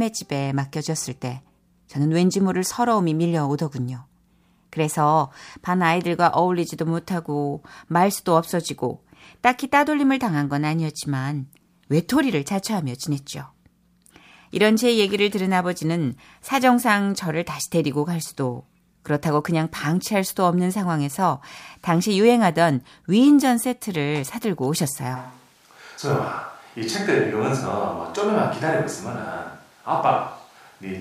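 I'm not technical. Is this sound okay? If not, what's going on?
No. At 25.17 s the recording most likely stopped using the close microphone and fell back on one further from the speaker, a switch to a distant microphone. From that moment to the end the speech suddenly sounds roomy and hollow, as if spoken across a room, with less body in the low end. It also drops a little in loudness, and more of the room's background noise comes through.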